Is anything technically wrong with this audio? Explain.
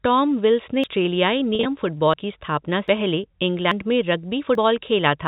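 Yes. At 0.84, 2.14, 2.88, 3.72 and 4.55 s the speech jumps forward, likely from a dropped buffer (overrun): the program missed collecting samples before the hardware overwrote them, so the edges splice together. Roughly a third of a second vanishes at 0.84 s, a fifth at 2.88 s (just before "की स्थापना"), and about a tenth at the others, including 2.14 s (just after "की स्थापना").

From 1.55 to 1.65 s there is packet loss with pitch repetition. About 70 ms went missing across 100 ms, in runs no longer than 40 ms, and the receiver filled each gap by repeating the last pitch cycle. This gives a brief held, buzzy tone. The telephone-band G.711 coding, which cuts everything above 4 kHz, is not itself at fault.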